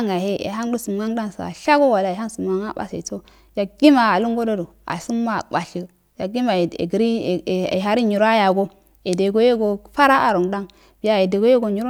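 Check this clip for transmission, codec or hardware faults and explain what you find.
No faults found.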